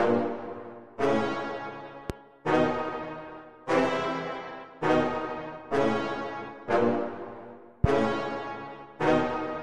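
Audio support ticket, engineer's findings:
Loud pop, 2.10–2.12 s: single sharp transient about 15 dB above programme level, with the sound carrying on underneath. Second loud pop, 7.84–7.87 s, about 20 dB above level. Cause likely a voltage step from a connector, switch or static discharge, shaped by the downstream circuitry. Waveform: isolated spike towering over the surrounding envelope. Spectrogram: thin vertical stripe spanning the full band, under 30 ms wide.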